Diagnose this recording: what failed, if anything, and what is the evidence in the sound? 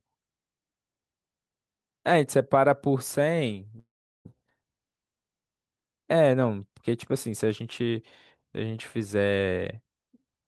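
Long network dropout at 3.79–4.27 s: the last sound smears into a fading buzz, then 0.39 s of silence; 0.46 s never returns, likely lost packets.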